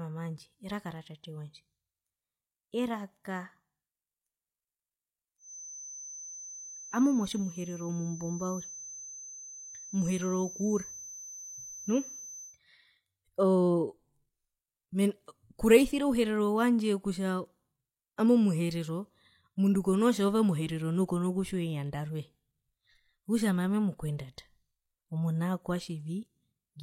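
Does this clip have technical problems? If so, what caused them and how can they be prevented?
Yes. A feedback whistle runs from 5.37 to 12.59 s, a thin tone at 6.1 kHz that swells and fades slowly, sitting around 15 dB below the speech. It is likely caused by the loudspeaker-to-microphone loop sitting at the edge of feedback, so that one frequency keeps ringing without growing into a howl. To prevent it, reduce monitor gain, move the microphone away from the loudspeakers, or notch out 6.1 kHz.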